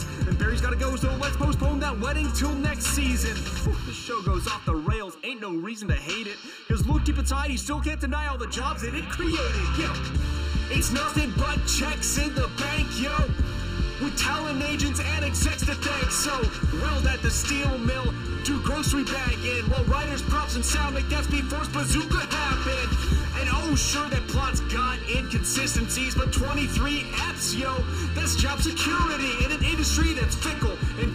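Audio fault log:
Throughout, channel delay (comb filtering): one channel trails the other by a bit under a millisecond, and when the two are summed to mono they cancel where they arrive out of phase. The first notch sits near 700 Hz, with further notches at odd multiples about 1.4 kHz apart, giving a hollow, phasey colour. Unlike a flanger or phaser, the notches never sweep, and unlike a single EQ cut, they repeat evenly up the spectrum.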